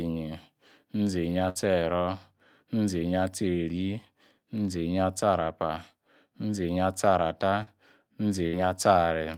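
At 1.49 s a burst of packet loss removes about 60 ms of speech. The receiver stretches the last sound into a fading buzz or hiss, which shows on a spectrogram as a flat, decaying band and then an abrupt jump. At 7.63 s a short concealed packet loss patches a 40 ms hole with synthesised continuation. It is heard as a brief smear and seen as a blurred strip. At 8.47 s another burst repeats the held, fading pattern over about 60 ms.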